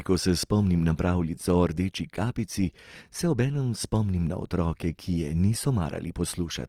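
Speech with Opus compression throughout: the sound turns grainy and rough with the full bandwidth intact, likely from CELT-mode encoding at something like 24 kbps.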